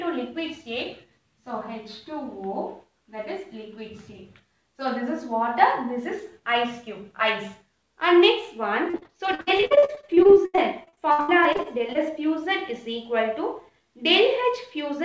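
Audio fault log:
8.90–12.12 s, repeated packet loss (robotic sound): over these three seconds, dozens of short dropouts follow one another, the longest about 80 ms. Each hole is patched by stretching the last sound forward, so about a third of the stretch is synthetic fill. That cycle of repeated extension and cut-off produces choppy sound with pieces missing, set within the call path's band limit, with nothing above 8 kHz.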